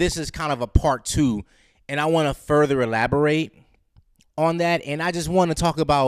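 Listening to the speech here, nothing stood out as a technical problem at any point.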